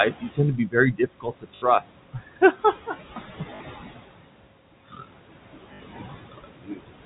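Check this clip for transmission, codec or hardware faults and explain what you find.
Three faults are audible: noise suppressor artifacts throughout, repeated speech cuts by that suppressor, and three short packet-loss repairs.

Noise suppressor artifacts run through the whole clip. The suppressor pulls steady background by about 20 dB frame by frame, so the room noise, about 11 dB under the speech, drops away in pauses and returns beneath speech.

Speech cut by the noise suppressor occurs at 0.10–0.76 s, 0.92–1.92 s, 2.13–2.95 s, 4.88–5.14 s and 5.90–6.83 s. The suppressor misreads parts of the speech as noise and lowers them by about 19 to 21 dB. Softer consonants and endings sound swallowed or faint.

Packet loss with last packet repeated appears at 1.56–1.62 s, 3.56–3.60 s and 5.74–5.80 s, lasting 60, 40 and 60 ms. The receiver replays the last packet to fill each gap, which fits 20 ms packets. 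The repeats give a brief robotic stutter buzzing near 50 Hz.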